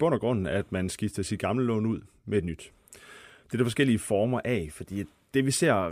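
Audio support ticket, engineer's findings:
No faults found in this speech clip; nothing to report in the engineer's findings.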